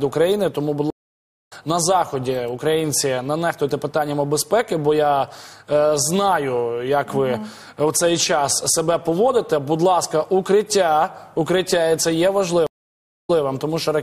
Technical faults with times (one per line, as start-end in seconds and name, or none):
0.90-1.53 stream reconnect
12.67-13.42 stream reconnect